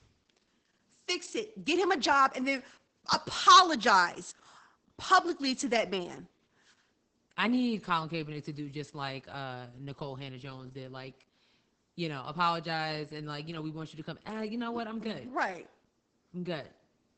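Throughout, Opus voice compression in SILK mode cuts everything above 8.7 kHz and leaves the speech hoarse and slightly robotic, which fits a bitrate around 10 kbps.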